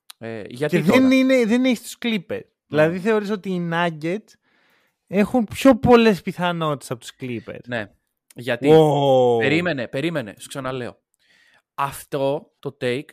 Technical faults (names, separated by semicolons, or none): none